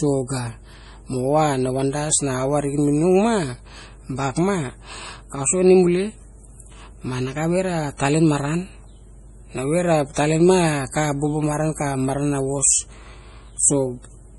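From start to end, nothing reaches above 11.4 kHz, and the sound is watery and swirly with smeared onsets. This is heavy damage, likely from MP3 compression at a low bitrate, which fits about 32 kbps. On a spectrogram the treble stops at a flat shelf, and speckled holes blink in and out below it.

From 10.14 to 10.17 s, a pre-echo puts about 30 ms of hiss ahead of a sharp attack. The codec spread noise sized for the loud onset across its whole block, so the quiet moment before it filled with hiss. The waveform shows a low fuzzy lead-in, and the spectrogram shows a broadband smear before the transient.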